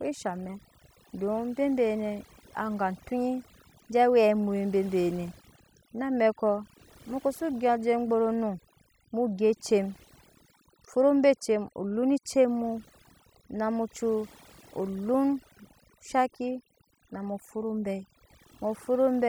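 Overdone noise removal runs throughout: bands near the noise estimate are cut too hard, leaving a near-silent, twinkling background.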